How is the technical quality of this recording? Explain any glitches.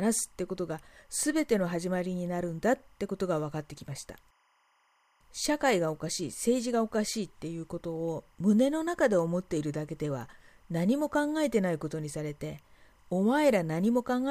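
The recording has one fault, timecode bleed, running through the whole speech clip. Linear timecode from an adjacent track or cable has leaked into the audio path. Its square-wave code alternates between roughly 1 kHz and 2 kHz, in a pattern that fits 25 frames per second. The result is a constant chirping warble sitting about 40 dB below the speech.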